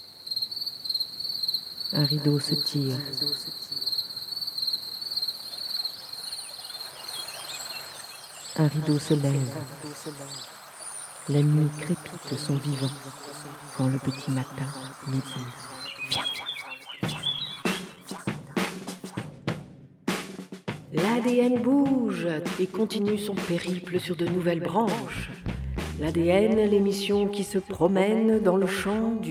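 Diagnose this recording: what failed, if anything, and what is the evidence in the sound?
The network stage failed, producing scattered short gaps between 17.39 and 18.20 s. About four brief holes open in that stretch, each at most around 20 ms, adding up to roughly 50 ms, or about 7% of the span. The receiver filled each one by extending the preceding sound, so the audio stays continuous but picks up small ticks and hiccups. On a spectrogram, look for narrow vertical strips where the harmonics briefly freeze or smear; the waveform shows short stretches of repeated cycles.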